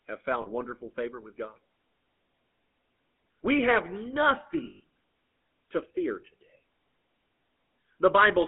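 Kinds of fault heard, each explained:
GSM full-rate codec: The speech was passed through the original GSM full-rate coder, which keeps only a vocal-tract model and a thinned-out pulse excitation, with a bit budget that fits about 13 kbps. Here that leaves a plainly audible buzzy, gravelly roughness over every syllable. The line band also runs only from about 150 Hz to 3.5 kHz, so the speech sounds thin and boxed-in, with no low body and no air or crisp sibilance on top.
lost GSM frames: When coded frames failed to arrive, the decoder reused the last good frame's parameters at a falling level instead of the missing sound, producing a held, metallic ring. At 0.42 s, just before "wonderful favor with", a 40 ms gap gives a brief rough smear. Around 4.64–4.80 s, 120 ms of sound is lost in scattered pieces, the longest run about a tenth of a second, so the ring persists and stutters.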